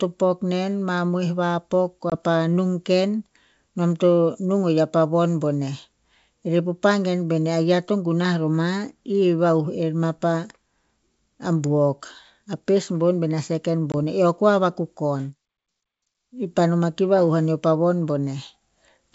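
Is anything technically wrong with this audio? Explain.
Yes. Packet loss on an ADPCM call hits at 2.1 s and 13.92 s: a single 20 ms packet vanishes into hard silence. Unlike a plain dropout, the G.722 decoder's predictor then misbehaves briefly, so the speech returns slightly distorted until it resynchronises.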